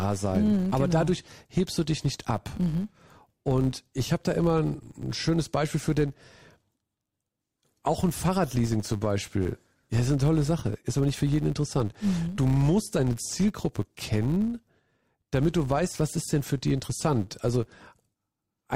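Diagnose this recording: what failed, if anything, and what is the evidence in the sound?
A processing filter restarted on every block, resetting to silence each 10 ms, so the speech carries a steady 100 Hz buzz that rises and falls with its level.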